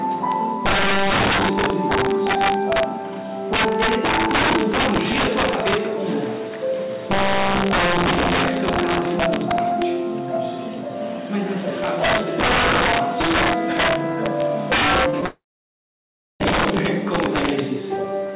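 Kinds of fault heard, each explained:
Integer overflow: Loud peaks pushed about 10 dB past the limit wrap to the opposite sign instead of clipping, giving harsh cracks on a small share of samples.
Short concealed packet loss: Around 15.1 and 15.21 s, brief gaps of a few hundredths of a second are bridged by continued sound, heard as quick smears.
Long network dropout: From 15.26 to 16.42 s the sound stops. A short fading tail gives way to about one second of silence, likely from a network outage, before audio resumes.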